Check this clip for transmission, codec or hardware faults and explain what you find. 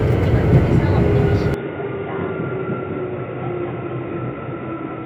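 One fault here. From 1.54 s the input likely switched to a poorer device. The sound drops about 10 dB, goes dull with nothing above 3.8 kHz, and picks up a faint new hiss.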